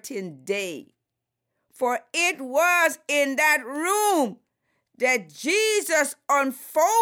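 At 1.93 s, just before "it was in that", and again at 3.76 s right after it, a bit error spike flips one sample by a power of two (about -29 and -23 dBFS), giving a bare broadband tick that, unlike a dropout click, leaves the surrounding audio intact.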